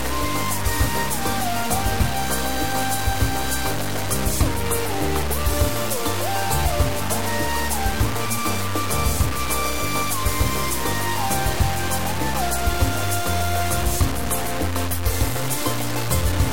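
From start to end, a coarse, grainy distortion rides on the sound and rises and falls with it, with quiet passages sputtering or dropping out. This likely comes from low bit depth without dither, truncated to about 3 bits, leaving error only about 10 dB below the signal. Unlike steady dithered hiss, the grit tracks the signal.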